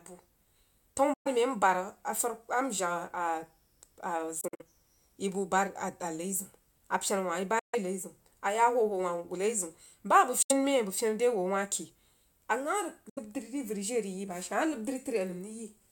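At 1.14 s the speech cuts to silence for about 116 ms, then resumes, consistent with a Bluetooth dropout: packets likely arrived too late at the headphones and were discarded, so playback skipped ahead. Further gaps occur at 4.41 s (116 ms lost in short holes spread over 186 ms, the longest 46 ms), 7.59 s (139 ms), 10.42 s and 13.09 s (70 ms each). Edges are abrupt or fade within a few milliseconds, and the missing material never returns.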